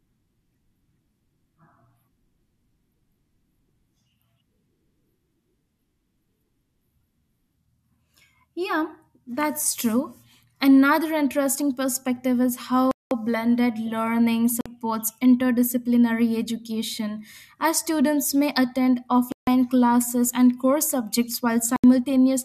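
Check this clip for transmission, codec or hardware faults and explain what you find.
The speech drops out to silence four times, a pattern that fits a Bluetooth stall. The gaps fall at 12.91–13.11 s after "interesting perspective is", 14.61–14.66 s after "blended learning", 19.32–19.47 s after "as students may attend", and 21.76–21.84 s. The likely cause is radio interference delaying packets until the headphone buffer empties. Playback then freezes for 50 to 200 ms and resumes.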